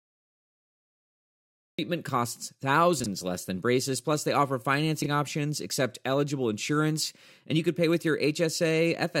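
Speech recording with a cut-off start: digital silence until 1.79 s, then the audio begins abruptly mid-sound with no attack, meaning capture started late. This is unlike a fade-in or a quiet lead-in. Chunks out of order occur at 3.00–3.06 s and 5.02–5.06 s, where a 20 ms chunk plays two and then one chunk late. The result is a brief jumble in which nothing is missing or repeated, which distinguishes it from a dropout or stutter.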